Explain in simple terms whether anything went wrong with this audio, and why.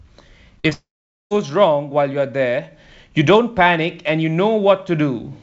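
Short concealed packet loss at 0.60 s and 0.70 s: tiny bits of the call arrived too late, so the receiver patched each gap, leaving brief smears. Long network dropout from 0.73 to 1.33 s: the sound briefly stretches into a fading buzz, then goes quiet for about half a second, likely because nothing arrived over the network.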